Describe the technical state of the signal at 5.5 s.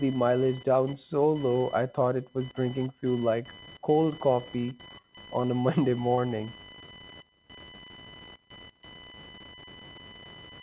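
Right around there you've got a short concealed packet loss, running from about 5.42 to 5.47 s, just before the 5.5 s mark. Roughly 20 ms of the call didn't reach the decoder in time, and the receiver papered over the gap by stretching the preceding speech for about 12 ms before blending back into real audio. That shifts the timing by a few milliseconds. It comes across as a quick smear or wobble, and a short consonant in that spot could get swallowed.

Underneath that, and still present at 5.5 s, is computer activity noise. It's a buzzy, chirpy pulsing at around 1 kHz, sitting roughly 20 dB below the speech. It comes from the machine's processor or graphics load pushing around the audio circuit's shared ground, so it rises and falls with what the computer is doing, not with the talker. The call path's 4 kHz band limit means everything here, including that buzz, stays below 4 kHz.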